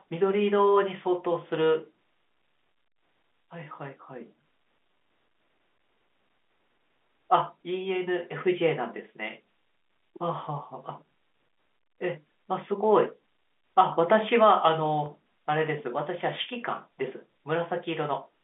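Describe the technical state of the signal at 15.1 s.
Packet loss with pitch repetition occurs at 15.06–15.08 s: a 20 ms gap, fitting one lost packet, is bridged by repeating the last pitch period, giving a brief held, buzzy sound.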